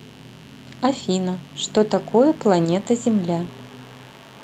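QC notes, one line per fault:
Throughout, mains buzz: a steady, raspy buzz sits under the speech at about 30 dB below it. Switching spikes twice per 50 Hz cycle from a dimmer, rectifier or unshielded run are getting in, and their harmonics climb into the kilohertz range, hence the rasp.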